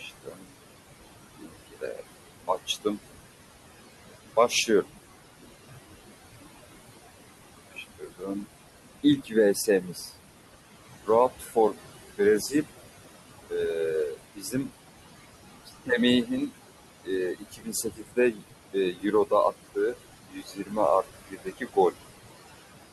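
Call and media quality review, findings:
Noise suppressor artifacts, whole clip. Room noise sits about 11 dB under the speech. The suppressor pulls it down by about 19 dB. It does this band by band, frame by frame. So the background sinks in pauses and comes back under speech. The component is the noise suppressor. Its gain per band keeps swinging between noise frames and speech frames.

Speech cut by the noise suppressor, five spans. First span 0.0–2.98 s, dips up to about 21 dB, roughly a second lost in all. Then 4.36–4.89 s, about 15 dB, a brief dip. Then 6.99–10.12 s, about 20 dB, roughly a second. Then 11.06–14.7 s, about 18 dB, under a second. Last span 15.66–21.96 s, about 20 dB, roughly two seconds. Soft consonants and word endings sound swallowed. The suppressor's estimate classed these low-level speech parts as noise and attenuated them.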